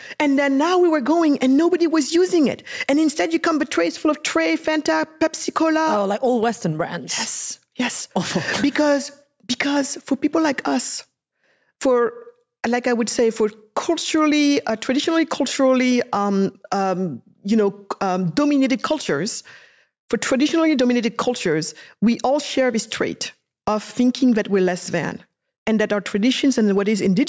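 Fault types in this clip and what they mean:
Gain pumping, throughout: the gain swings by around 10 dB, so the audio breathes in and out and loud and soft passages sit unnaturally close in level. The likely cause is input gain set far too high, with a fast limiter or compressor clamping down on each peak. The call's microphone processing leaves no content above 8 kHz.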